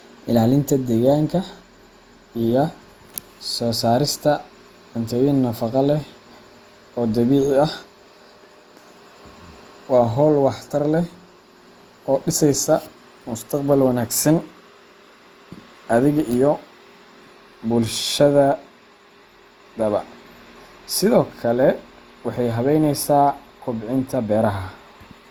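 Speech, swirly and hollow throughout with blurred onsets: generation loss, likely from about three Opus passes near 48 kbit/s. A spectrogram shows nothing above 20.4 kHz.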